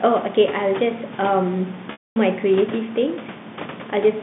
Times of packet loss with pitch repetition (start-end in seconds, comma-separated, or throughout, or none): 1.92-2.16